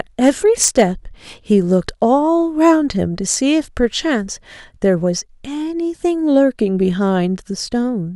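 Speech with hard clipping: peaks get cut flat from 0.25 to 0.82 s, driven about 8 dB over into harsh fuzz, then a brief crackle at 2.67–2.71 s, about 1 dB over.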